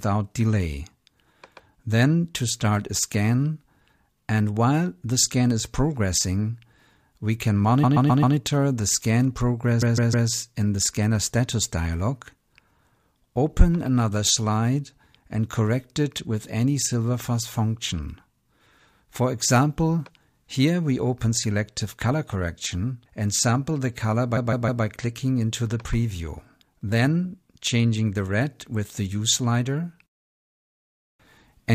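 At 7.83 s, 9.81 s and 24.36 s, repeated frames loop a block of about 0.13 s (four extra times) or 0.16 s (three extra), heard as a stutter. Unlike a dropout, nothing goes missing; the audio gets longer.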